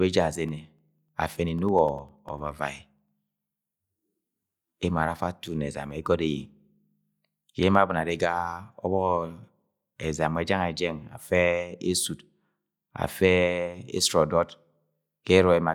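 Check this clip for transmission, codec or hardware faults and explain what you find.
Between 0.49 and 3.58 s the speech carries a steady train of small ticks, one every 0.1 s, about thirty in all. These are periodic USB or driver dropouts: something stalls the audio path on a fixed schedule, and each stall leaves roughly half a millisecond of silence in the waveform.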